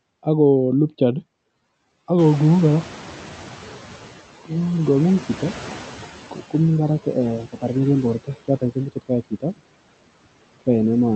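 Speech runs throughout, and the background between phrases dips while it swells under the voice: noise suppressor artifacts, from band-by-band gating that pulls the steady noise down by about 13 dB. At about 2 s the room noise jumps by roughly 15 dB, and from 2.18 to 4.25 s it comes through louder before sinking by about 11 dB. That is the noise suppressor catching up, its noise estimate taking about 2.1 s to adapt to the new level. Between 9.31 and 9.61 s, about a tenth of a second of speech turns faint and swallowed, dropping by up to about 18 dB. That is speech cut by the noise suppressor, which mistook those soft sounds for background. The top end stops near 8 kHz, which fits the Opus call codec at around 32 kbps.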